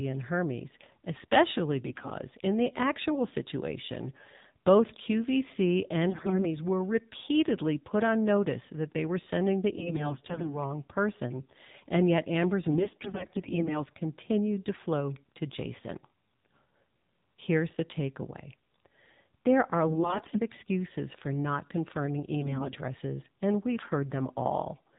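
Throughout, the speech passes through the AMR narrowband mobile codec at 7.4 kbps. Nothing above 4 kHz survives, and the low bitrate gives the speech a buzzy, synthetic edge. Unlike plain low-pass filtering, the thinning comes from the codec's vocal-tract model, not just lost treble.

AMR bit errors strike at 1.86–2.11 s, 6.10–6.46 s (ending just before "were repeatedly put on"), 9.72–10.59 s, 12.71–13.84 s (just before "continued to flow to"), 19.88–20.41 s and 22.40–22.75 s. Corrupted pulse positions and gain values make the speech hoarse, scratchy and gargly, while its pitch and level hold. Packet loss would bring gaps or smeared repeats instead.

At 20.19 s, just after "there are" and inside the fifth burst, a single sharp click cuts through. A handful of samples, well under a millisecond, were likely dropped, so the waveform jumps abruptly. Unlike the gargle, it is one instantaneous tick.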